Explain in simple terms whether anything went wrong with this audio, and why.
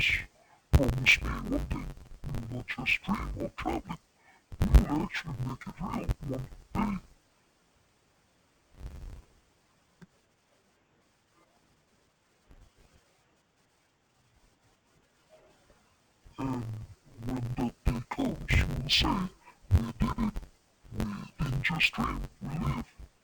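The whole clip suffers from interleaved audio read as planar. Stereo samples get split wrongly in tiny 10.67 ms chunks, so the speech sounds dull, robotic and buzzy.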